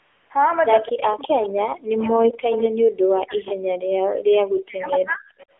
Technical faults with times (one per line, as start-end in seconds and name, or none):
0.00-5.60 AMR narrowband mobile codec
0.00-0.30 AMR comfort noise
0.89-5.28 speech suppressed in double talk
1.43-1.49 echo leak
2.52-2.62 echo leak
3.46-3.53 echo leak
4.86-4.93 echo leak
5.39-5.46 echo leak